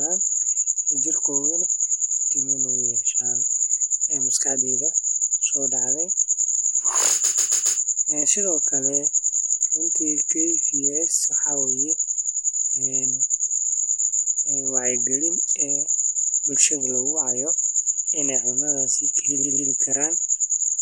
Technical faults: repeated frames

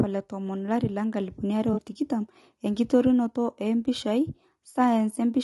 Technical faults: low-delay AAC compression; AAC frame loss with concealment

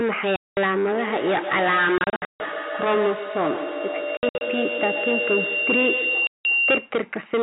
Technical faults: hard clipping; packet loss filled with silence; feedback howl

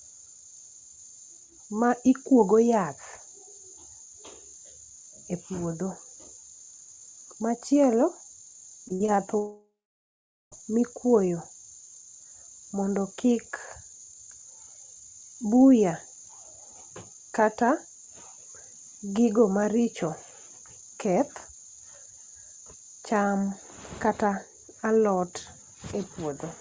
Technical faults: repeated packet loss (robotic sound); long network dropout

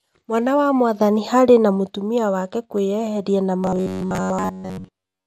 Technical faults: MP2 compression; DAB burbling; robotic sound from repeated short buffers

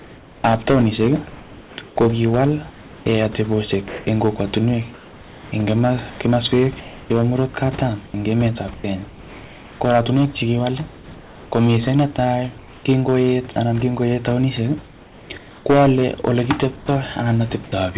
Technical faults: hard clipping; comfort noise in place of the background; sound chopped by the voice detector

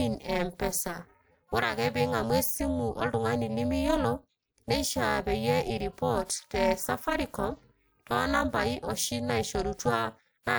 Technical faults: overlap-add ripple

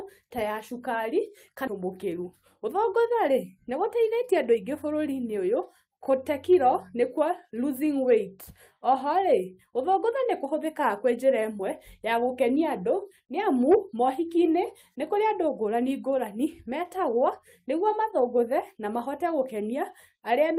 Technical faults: skip ahead; jitter buffer speed-up

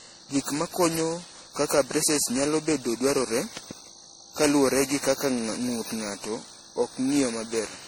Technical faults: generation loss; loud pop

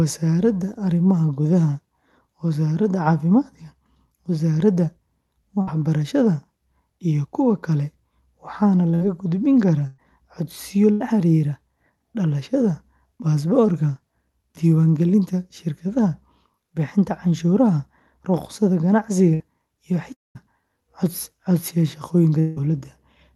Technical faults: burst of packet loss; long network dropout

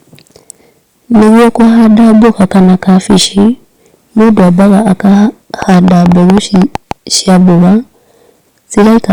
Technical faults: hard clipping; train of clicks

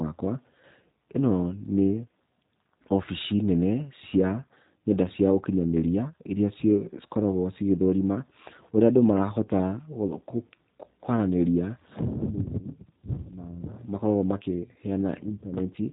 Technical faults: G.729 codec

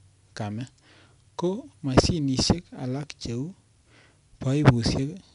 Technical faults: 4-bit ADPCM compression

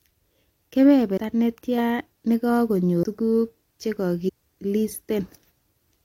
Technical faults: compressed frames skipped

